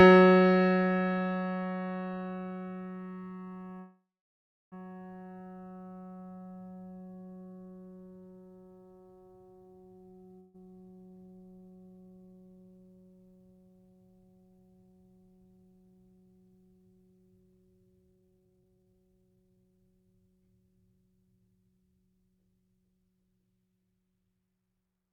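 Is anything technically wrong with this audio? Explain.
Yes, there are two faults in this music clip.

From 3.79 to 4.74 s there's a call audio freeze. The last bit of music gets stretched into a fading buzz, then about 0.67 s of silence, and the track picks up exactly where it left off, so nothing is lost but everything after arrives about 0.92 s late. That's likely packets stalling in transit and the jitter buffer running dry.

At 10.40 to 10.56 s there's a burst of packet loss. The receiver fills about 141 ms by holding and fading the last sound, then the music jumps ahead. About 320 ms of material is missing, so playback comes back roughly 180 ms earlier in the timing, recovering some of the delay left by the freeze.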